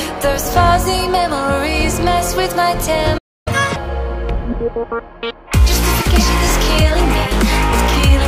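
The audio cuts to silence at 3.17 s and stays silent until 3.48 s, a gap of about 0.28 s, before continuing where it stopped. This is a playback stall, most likely from the player's buffer running dry or its output thread being blocked. From 3.48 s to 3.76 s comes catch-up at higher speed. The player resamples its backlog at 2.0 times normal speed to recover the lost time, raising the pitch by around ten semitones, and then returns to normal rate and pitch.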